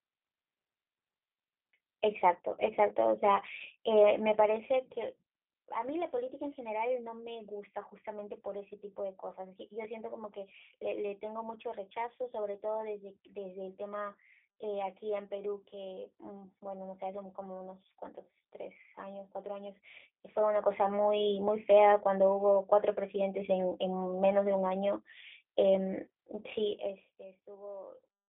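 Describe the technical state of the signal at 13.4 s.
At 13.4 s the speech carries G.729 codec damage, present throughout: rebuilt from a vocal-tract filter, pitch predictor and sparse pulses, it sounds rough and synthetic, fitting an 8 kbit/s link. A spectrogram shows energy confined to 250 Hz to 3.5 kHz, with smeared harmonics.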